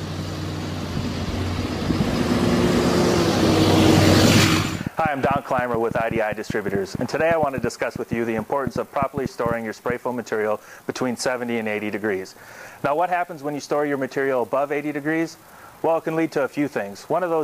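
A train of clicks runs from 3.50 s to 9.91 s: around forty sharp, near-identical pulses arriving at about 6.7 per second but with uneven spacing, so the ticking stumbles rather than keeping a steady beat. The clicks stand roughly 10 dB above the surrounding sound and stay audible through quieter gaps as well. Their repeated shape points to something outside the audio itself, likely electrical interference or a faulty connection or power supply.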